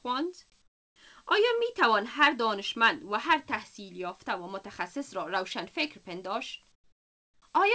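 At 0.62–0.96 s and 6.72–7.42 s, comfort noise replaces the background: a smooth, featureless hiss about 16–17 dB quieter, likely from discontinuous transmission, rather than a dropout's dead silence.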